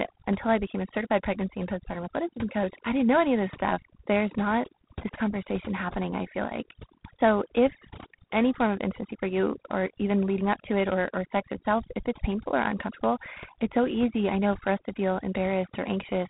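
Across the whole recording, noise reduction has been pushed far too hard: frequency bands sitting near the estimated noise floor are cut almost to nothing, taking the quieter parts of the speech with them. This overdone noise removal leaves near-silent pauses sprinkled with twinkling specks.

Throughout, the speech has also passed through G.726 ADPCM coding, which sends only a few bits per sample describing the difference from a running prediction. The plainly audible damage points to the 24 kbit/s rate: a harsh, rasping hiss that rises and falls with the voice, with nothing above 3.9 kHz.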